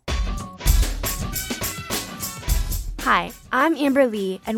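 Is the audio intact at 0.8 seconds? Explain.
No. From about 0.82 to 0.84 s there is damaged data in a compressed stream. Some bytes in the encoded file are wrong there, so the decoder misreads those frames, loses sync and hunts for the next valid frame header. The result is a short chirp or blip lasting roughly 20 ms. On a spectrogram it appears as a narrow vertical smear of energy across many frequencies, and on the waveform as an abrupt break in the signal.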